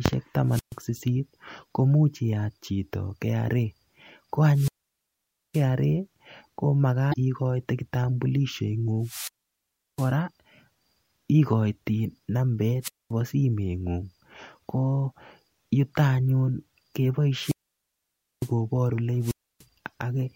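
The speech opens with a wireless microphone squelch dropout from 0.48 to 0.78 s: the FM signal fades, hiss rises briefly, and the receiver's squelch mutes the output for about 129 ms before the voice returns. The same dropout happens again from 4.52 to 5.66 s, with a mute of about 866 ms.

Between 7.10 and 7.14 s there is a short glitch from damaged data in the compressed stream. Corrupted bytes make the decoder misread the frames and lose sync. It then searches for the next valid frame header.

Four more squelch dropouts follow, each with the same rise of static, a near-silent gap and the voice returning. The first runs from 9.00 to 10.14 s with about 709 ms muted. The second is at 12.82 to 13.11 s with 226 ms muted, the third at 17.38 to 18.52 s with 909 ms muted, and the fourth at 19.21 to 19.65 s with 292 ms muted.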